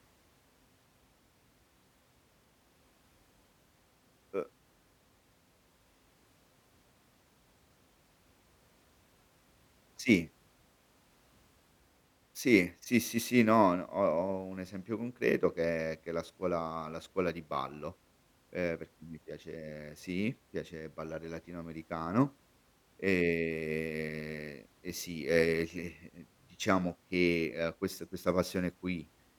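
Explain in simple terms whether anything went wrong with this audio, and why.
Nothing went wrong with this recording, as no technical faults can be heard anywhere in it. The speech comes through cleanly.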